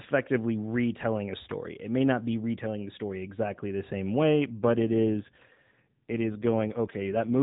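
From 4.50 s, right after "exactly the same way", the speech turns rougher, buzzier and more synthetic and stays that way until 7.39 s, with no gap and no narrowing of the band. This is an AMR rate drop: the mobile codec was switched to a lower speech rate, most likely because of a weak radio link, leaving fewer bits for the vocal-tract model. The sound fits a step from the 12.2 kbps heard earlier on this narrowband AMR path down to about 5.9 kbps.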